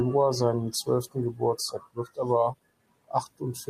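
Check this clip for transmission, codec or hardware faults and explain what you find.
One fault turns up twice in this speech: speech cut by the noise suppressor. From 1.33 to 1.42 s the sound dips by about 9 dB and goes faint. Between 1.71 and 2.18 s it drops further, by about 18 dB, and parts of the speech sound swallowed, with roughly 150 ms affected. The suppressor mistook these quieter stretches for noise and turned them down along with the room noise, which sits about 25 dB below the speech.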